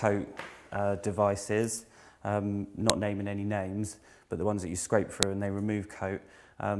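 At 2.90 s a sharp, loud snap cuts in, and the same fault recurs at 5.23 s: a file header played as audio. Separate WAV pieces were joined without stripping each later piece's header, so its few dozen bytes of metadata were read as sample values. On a waveform each appears as a near-instant sharp spike unrelated to the surrounding sound; a spectrogram shows a thin vertical line spanning the whole frequency range.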